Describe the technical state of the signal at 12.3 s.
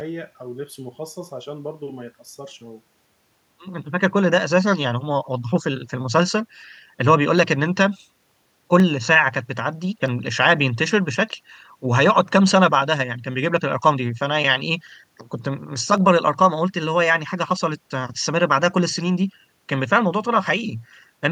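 At 12.3 s the signal is intact, with no audible fault at that moment.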